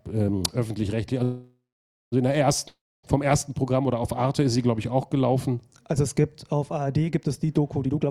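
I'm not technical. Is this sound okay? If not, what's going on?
No. From 1.23 to 2.14 s the sound stalls into a fading buzz, then half a second of silence, and resumes where it stopped: a call audio freeze, likely from delayed packets.

From 2.68 to 3.05 s there is another fading buzz and silence. This is a long network dropout: about 0.36 s of audio is simply gone.

From 7.85 s to the end, a jitter buffer speed-up plays the sound at 146% speed, same pitch, trimming roughly a seventh of a second.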